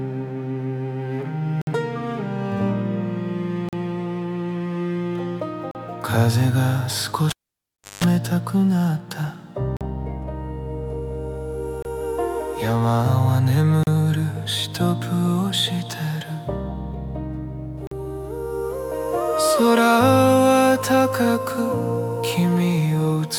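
Short hard-edged dropouts of silence, roughly 20 to 60 ms each, cut into the sound at 1.62, 3.69 and 5.71 s. These are gaps between stream segments: timestamps of consecutive 2-second segments leave a small hole that the player pads with silence, so nothing is lost.

From 7.29 to 8.04 s a pop drops the audio to near silence for about 680 ms, including a roughly 180 ms burst of 50 Hz mains buzz, before a second pop as it returns: a cable pulled and plugged in, the buzz coming as only the tip made contact. A brief segment gap also falls inside this stretch at 7.77 s.

The segment gaps resume at 9.77, 11.82, 13.83 and 17.87 s, keeping the same 2-second rhythm.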